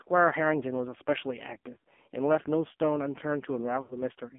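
Throughout, the speech sounds boxed-in, buzzy and synthetic, with nothing below about 200 Hz or above 3.5 kHz. This is the AMR narrowband mobile codec working hard. Its coarse vocal-tract model and sparse pulses suggest a low mode near 5.9 kbps, and the damage is heavy.

At 1.74 to 1.77 s, a brief dip and warble marks lost AMR speech frames. The decoder covered the single 20 ms gap by repeating its last settings. From 3.82 to 4.01 s, an 80 ms run stretches the sound and fades it toward silence before it returns rough.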